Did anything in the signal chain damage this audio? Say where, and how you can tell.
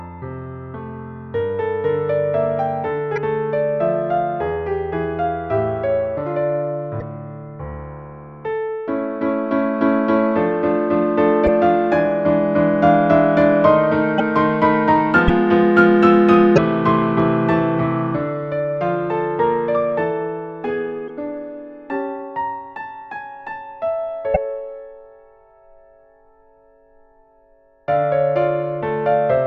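Yes: eight roughly 30 ms skips with chirps, noise bursts or short holes, at 3.15, 6.99, 11.46, 14.17, 15.27, 16.55, 21.07 and 24.33 s. At the codec stage, this is likely a broken MP3 bit reservoir: lost 26.1 ms frames leave the next frame borrowing the wrong bytes.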